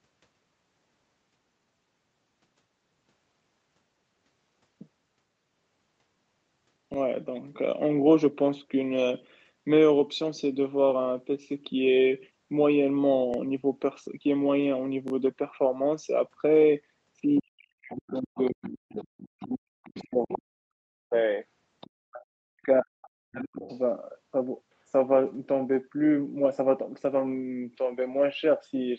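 A repeated buffer occurs at 6.94 to 6.96 s and 13.34 to 13.36 s, where a 20 ms block plays twice, and at 15.08 to 15.12 s, where it plays three times. Fresh audio arrived late, so the device replayed its last buffer, heard as a brief stutter with hard joins.

From 17.35 s, the other side's voice leaks through at 17.35 to 17.41 s, 17.92 to 19.43 s, 19.84 to 20.42 s, 21.81 to 21.9 s and 23.62 to 23.78 s. This second voice sits about 15 to 25 dB below the main speech, most likely loudspeaker echo the canceller left behind.

Speech is suppressed in double talk from 17.4 to 21.13 s and 22.05 to 23.63 s. The main voice dips by up to roughly 40 dB, thinning and dropping out in pieces, likely because the echo canceller attenuated everything while both sides spoke.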